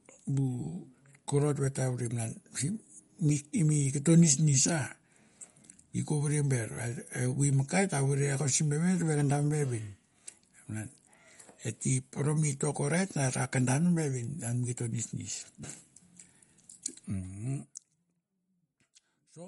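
From start to finish the speech sounds watery and swirly, with sibilants turned metallic, and a spectrogram shows a hard ceiling at 11.2 kHz above which nothing appears, plus flickering holes below it. This is likely MP3 compression, consistent with a low bitrate around 48 kbps.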